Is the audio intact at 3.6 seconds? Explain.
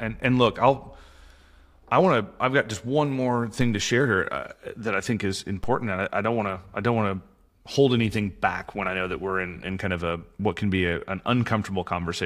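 No. At 3.61 s a single low thump sounds under the speech, which carries on unchanged. This is a DC step: the waveform's zero line suddenly jumps by about −22 dBFS, then drifts back as a 2 Hz high-pass filter bleeds the offset away.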